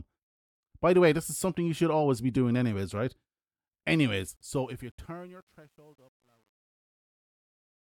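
From 4.27 s the speech turns gritty, worst from 5.15 s to 7.83 s. This is truncation distortion on a fade: the fade-out lacks dither, which fits a 10-bit stage.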